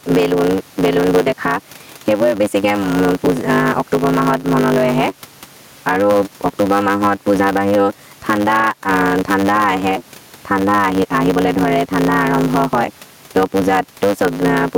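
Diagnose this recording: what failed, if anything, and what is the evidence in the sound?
A block size mismatch (truncated) at the driver or buffer stage runs throughout: a steady 100 Hz buzz sits under the speech, which plays 1.16 times too fast yet keeps its normal pitch. That fits a 512-sample block whose tail is dropped on every pass. A resampling error would shift the pitch.

Gain pumping is also present the whole way through: the background, normally about 35 dB below the speech, swells in each pause and ducks by around ten decibels under every loud syllable. The likely cause is excessive input gain meeting a fast limiter in call processing. Steady room noise would not rise and fall like this.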